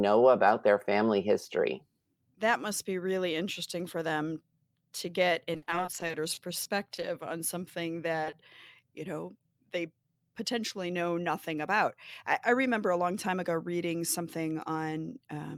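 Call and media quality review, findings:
Repeated packet loss (robotic sound), 5.53–7.04 s, after "for them to get", before "on something": choppy stretch with about fifteen holes, longest 60 ms. Jitter buffer/decoder concealment extends the last sound across each hole, about a fifth of the span.

Short concealed packet loss, 8.24–8.28 s and 8.30–8.34 s, after "on something", before "you know they": two brief smears, each 20 ms missing. Decoder concealment continues the prior sound for 20 ms each time, then blends back.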